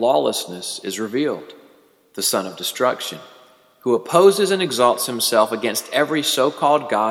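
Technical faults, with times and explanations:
No technical faults detected in the audio.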